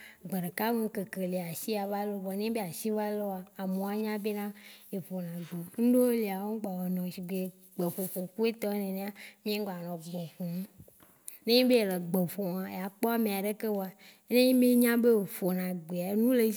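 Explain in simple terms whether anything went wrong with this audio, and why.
Nothing went wrong: the speech recording carries no audible technical fault at any point.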